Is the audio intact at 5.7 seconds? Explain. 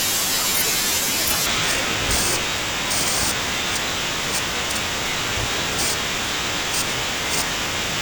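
No. From 1.46 s to the end of the clip, the speech suffers from stereo read as mono. The left and right samples are taken in turn as one channel, so every second of sound is stretched over two. At 5.7 s the speech runs at half speed and sits an octave (12 semitones) low, with a faint mirrored copy in the upper half of the spectrum. That mirrored copy separates it from a plain sample-rate mismatch, which slows and lowers the sound without one.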